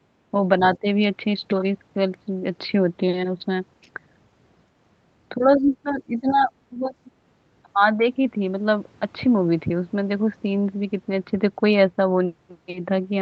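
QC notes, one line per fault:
0.8–0.86 s, 5.38–6.51 s, 6.7–6.91 s, speech suppressed in double talk: the speech dips by about 15 dB, briefly at 0.8 s, in pieces adding up to roughly 0.7 s across the 5.38–6.51 s stretch, and again for about 0.2 s at 6.7 s. It sounds like the talker is being pushed back. The likely cause is both sides talking at once, so the echo canceller could not tell the talker from the loudspeaker echo and attenuated everything.
6.41–6.46 s, other side's voice leaking through: a faint, short scrap of a second voice surfaces inside the suppressed stretch, sitting roughly 30 dB below the talker. It is brief. The likely cause is the far end's voice playing from the talker's loudspeaker and reaching the microphone, with the echo canceller failing to strip out all of it. The band-limited call path carries nothing above 8 kHz.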